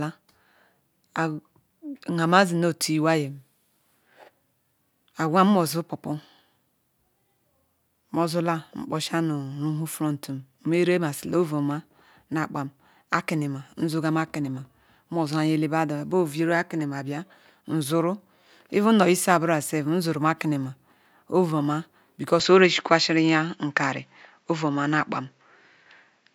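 Speech that abruptly turns duller at 22.40 s, losing everything above 7.6 kHz and shifting level by about 5 dB; the input likely switched to a poorer device.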